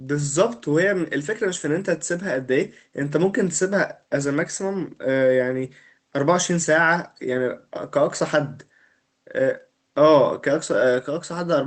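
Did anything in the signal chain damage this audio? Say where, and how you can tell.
No, nothing in the signal chain damaged this speech.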